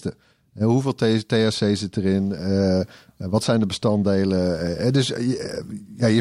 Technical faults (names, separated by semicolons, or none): none